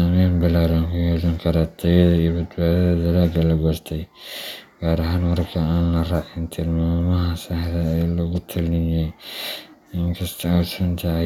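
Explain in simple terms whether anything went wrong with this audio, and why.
Listening to this speech recording, nothing stood out as having gone wrong.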